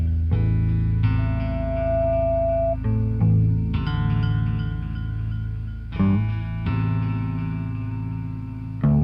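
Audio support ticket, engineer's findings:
Loudspeaker feedback squeal, 1.18 to 2.77 s. A steady 666 Hz tone swells over roughly 0.7 s until it is about as loud as the surrounding audio. The probable cause is a microphone picking up its own loudspeaker, with loop gain above unity at 666 Hz, so that frequency regenerates until the amplifier limits it or the loop is broken. On a spectrogram it shows as a single bright horizontal line at 666 Hz that brightens as it builds. On a waveform the envelope swells into a dense, even-amplitude block.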